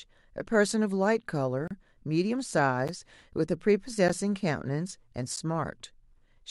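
Blocks of digital silence cut the speech abruptly from 1.68 to 1.71 s, then at 2.88, 4.08 and 5.36 s. The last three are 11.6 ms each, which fits a 512-sample buffer going unfilled. The first gap is heard as a short hole, the last three as ticks.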